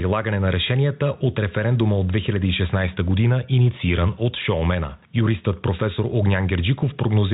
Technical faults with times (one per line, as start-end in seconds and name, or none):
0.00-7.33 gain pumping